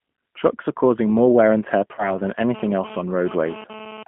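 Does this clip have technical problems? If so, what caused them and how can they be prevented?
Yes. Throughout, the speech sounds narrow, slightly rough and synthetic, with plainly audible codec damage: nothing below about 150 Hz or above 3.4 kHz survives. This is the G.729 codec, specifically G.729A at 8 kbit/s. It does not send the waveform. It sends a vocal tract filter, a pitch predictor and a few pulses per short frame, and the decoder rebuilds an approximation from them. Using a wideband codec such as G.722 or Opus avoids this.

Right after "more wear and tear", from 1.95 to 2.17 s, the speech briefly turns stretched and smeared as it fades, then sounds weak or distorted before recovering. This is VoIP packet loss concealed by the speech codec. About 30 ms of audio went missing, which fits a single lost packet. The decoder filled the gap by extending its last pitch and filter settings at falling gain. 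Because each frame depends on the previous one, the damage outlasts the gap. A jitter buffer and a network with prioritised voice traffic prevent it.

From 2.54 to 4.03 s, a hard, raspy buzz sits at about 15 dB below the speech. It comes and goes rather than holding steady. This is GSM phone buzz. A 2G phone nearby was transferring data and transmitting bursts at 217 Hz, and the audio circuitry rectified those radio pulses into a harmonic-rich tone unrelated to the speech. Keeping mobile phones away from microphones and cables, or switching them off, prevents it.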